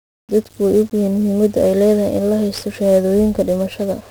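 This speech clip... no, must not start that way.

Speech heard through heavy 1-bit DFPWM compression throughout: each sample drives an adaptive level up or down, leaving dense broadband fuzz and crackle, with the treble buried under hiss.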